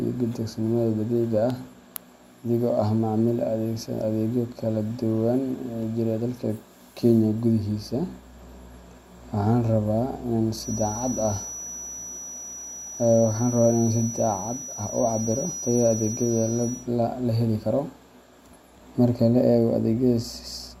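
From 10.53 to 16.90 s a feedback whistle sits behind the speech: a thin tone at one pitch, 5.9 kHz, slowly swelling and fading, roughly 10 dB below the voice, likely from a loudspeaker-to-microphone loop hovering just under runaway. A spectrogram shows one persistent horizontal line; the waveform barely changes.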